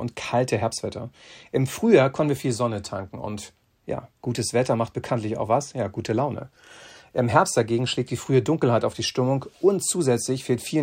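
No technical fault can be heard anywhere in the clip, with no dropouts, clicks, distortion or timing errors to report.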